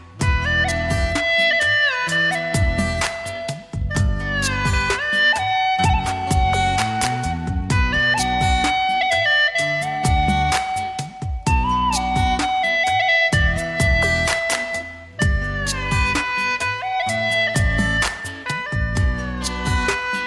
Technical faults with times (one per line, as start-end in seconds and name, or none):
none